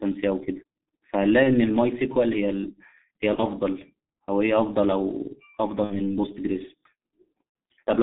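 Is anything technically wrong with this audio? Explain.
Yes. Throughout, the speech carries heavy G.723.1 codec damage. The band is limited to about 150 Hz–3.5 kHz, and the sound is muffled and hoarse with smeared consonants, which fits a low-rate mode near 6.3 kbit/s.

VoIP packet loss concealed by the speech codec occurs at 1.43–1.50 s, 3.35–3.41 s, 5.84–6.15 s and 7.49–7.55 s. The decoder extrapolates missing 30 ms or 60 ms stretches into a fading buzzy tone or coloured noise, with weak, distorted recovery afterward.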